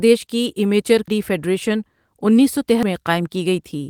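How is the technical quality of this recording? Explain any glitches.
There are two glitches in this speech: audio missing between chunks, at 1.08 s and 2.83 s. Each is a sudden skip losing about a third of a second, likely from chunked recording dropping audio at each handover.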